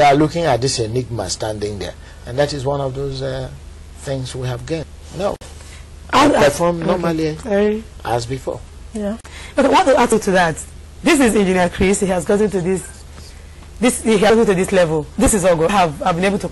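At 4.83 s the audio jumps forward with no silence, as if about a fifth of a second just went missing. That's most likely a dropped buffer (overrun): the capture side didn't grab its samples in time, the hardware wrote over them, and the two sides got spliced straight together. The same jump shows up again at 10.12 s, again about a fifth of a second gone, and at 15.69 s, where it's shorter, roughly a tenth of a second.

In between, at 5.36 s there's a gap at a join of encoded pieces, a hole of about 52 ms, and another at 9.21 s lasting about 37 ms. Here the material was encoded in separate chunks and butted together without trimming. Each encoder run leaves its start-up delay and the padding in its final frame, so a little silence sits at each seam before the audio picks up right where it left off.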